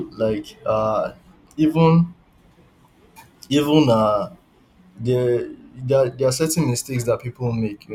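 From 2.38 to 4.97 s the speech turns thin, bright and sibilant: pre-emphasis left on. The treble lift added before recording was never undone, so highs stand about 8 dB above 1 kHz at 10 kHz, which fits the CD 50/15 µs curve.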